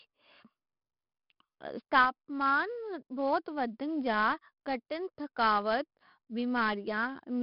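Heavy 4-bit ADPCM compression runs throughout the speech: a gritty hiss riding every loud syllable, dull above 5.3 kHz, fitting roughly 44 kbps. Unlike perceptual codecs, it has no swirling, only level-tracking grit.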